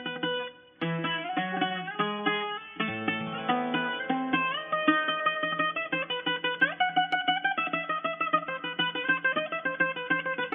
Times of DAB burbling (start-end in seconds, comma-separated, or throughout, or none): none